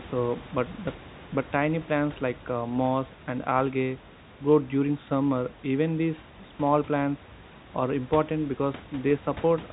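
Nothing goes wrong anywhere in this speech clip: the room's background noise sits about 19 dB under the talking, and the telephone coding simply does what it always does, with nothing getting through above about 3.8 kHz.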